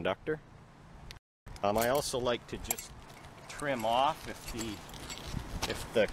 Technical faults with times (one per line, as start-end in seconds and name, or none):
1.17-1.47 playback stall
1.47-1.75 time-compressed catch-up